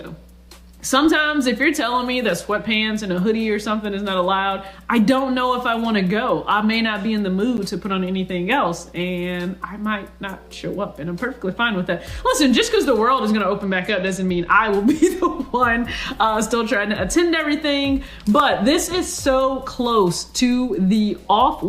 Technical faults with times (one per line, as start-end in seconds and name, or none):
7.57 block of digital silence
13.61-14.70 Bluetooth SBC bit pool drop